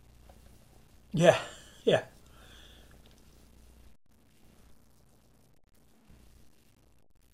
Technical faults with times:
0.00-7.33 low bit depth without dither
0.53-1.11 DAB burbling
2.25-3.14 DAB burbling
4.98-5.97 DAB burbling
6.83-7.06 DAB burbling

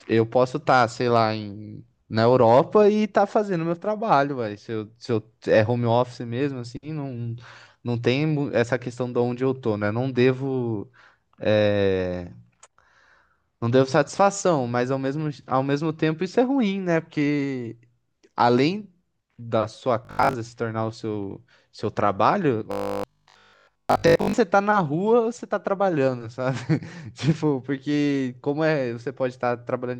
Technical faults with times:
20.05-20.35 robotic sound from repeated short buffers
22.71-24.37 robotic sound from repeated short buffers

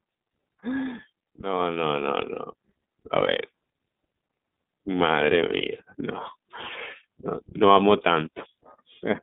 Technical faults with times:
0.00-9.23 iLBC codec

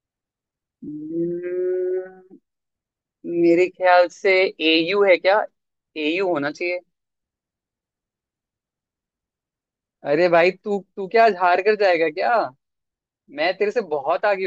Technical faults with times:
none

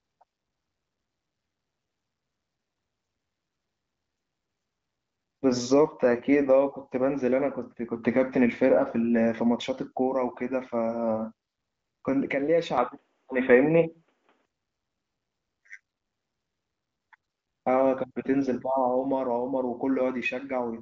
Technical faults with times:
12.78-14.45 input switched to a poorer device

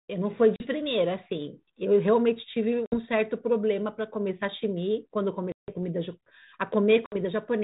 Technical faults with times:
0.56-0.67 packet loss on an ADPCM call
2.86-2.95 packet loss on an ADPCM call
5.52-5.71 packet loss on an ADPCM call
7.06-7.16 packet loss on an ADPCM call

